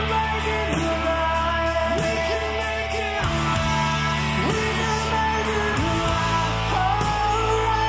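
No technical faults can be heard anywhere in the clip.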